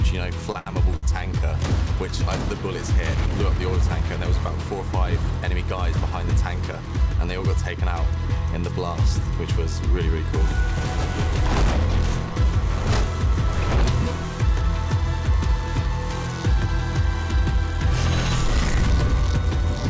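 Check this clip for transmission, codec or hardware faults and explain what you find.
Two kinds of fault turn up, both from the network side: a cluster of short stalls from late packets right at the start, and one jitter buffer speed-up a bit later. The audio also tops out at 8 kHz, which fits a wideband call codec along the lines of G.722 at 64 kbps.

The short stalls from late packets come at 0.52 to 0.57 s, 0.59 to 0.68 s and 0.96 to 1.05 s, lasting 28, 74 and 65 ms. Each time a packet showed up late, the jitter buffer ran dry, so the receiver held the last bit of sound until the packet arrived and then carried on from the same spot. Nothing is lost, but the sound hangs slightly, with a faint buzzy smear, and the delay grows by each stall's length.

The jitter buffer speed-up runs from 6.60 to 7.41 s. By then the buffer was holding more than it wanted, so the receiver trimmed tiny pitch-period slices over and over, around 40 ms in total, to catch up. 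Playback runs at about 105% speed with the pitch unchanged, so that stretch feels a touch hurried, a small forward lean in the timing.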